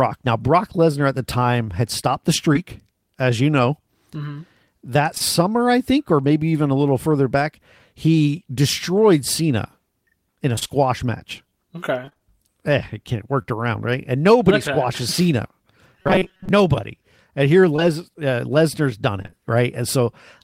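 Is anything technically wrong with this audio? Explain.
Yes. The speech has three kinds of transmission fault.

Short concealed packet loss occurs at 2.53 s, just after "time had stopped the", then twice back to back at 5.15 s and 5.18 s, at 13.42 s just before "around right", and at 17.76 s. Each time about 20 ms of audio failed to arrive, and the receiver filled the gap by extending the preceding sound before rejoining the real signal. Each one is a single brief smear or wobble. Because it is isolated, it does not turn into sustained choppiness.

Repeated packet loss (robotic sound) affects 10.56–10.71 s, just after "in a", with four gaps; 12.05–12.22 s, with four gaps; and 19.22–19.34 s, with three gaps. The longest gaps are 24, 28 and 23 ms, and roughly half of each stretch is concealment. With so many patches close together, the sound turns choppy, with pieces missing. The roughness is irregular rather than held at one pitch.

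Robotic sound from repeated short buffers occupies 16.02–16.49 s. Across most of that half second the speech becomes a rigid, metallic buzz at 188 Hz while still loosely following the speech. The likely cause is software repeating the last few milliseconds whenever fresh audio arrives too seldom, which fits a buffer of about 5.3 ms. Unlike packet loss, the buzz stays locked at one steady pitch instead of breaking up irregularly.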